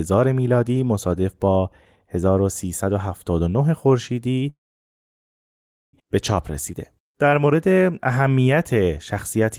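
At 4.49 s a call audio freeze begins: the last sound carries on briefly as a fading buzz or hiss, then silence holds until 5.95 s. Packets were likely delayed until the jitter buffer ran dry; speech resumes where it stopped, nothing lost, about 1.44 s late.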